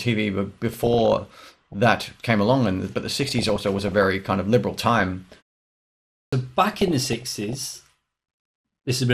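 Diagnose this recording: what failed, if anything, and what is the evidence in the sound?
Codec stage: the whole clip sounds dull, with a gurgling, granular edge as upper bands drop in and out and the remaining ones are coarsely quantised. That is MP2 compression, likely at a rate around 80 kbps. Unlike burbling, it is steady rather than bursty.

Transmission stage: DAB burbling, heard as bursts of burbling from 0.73 to 1.73 s (ending just before "that came along and"), 3.06 to 4.06 s (between "along and but the" and "kind of liberal"), 4.89 to 5.43 s (after "kind of liberal") and 6.64 to 7.62 s. Residual bit errors, roughly half a percent, corrupt the audio data so short blips of noise land in single sub-bands.

Playback stage: a clipped start after a pause at 6.27 s, where about 55 ms of the onset is swallowed after a 0.93 s gap while the output device wakes. Muted pauses drop only background and lose no speech, whereas here the first sounds themselves are missing.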